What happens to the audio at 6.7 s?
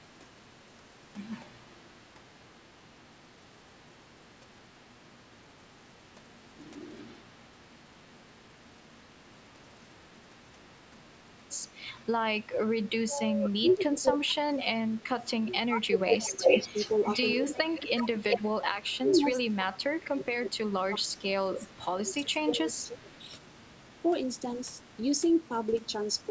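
The echo canceller likely mistook overlapping talk for echo, so speech was suppressed in double talk from 6.71 to 6.76 s, a brief dip of roughly 5 dB.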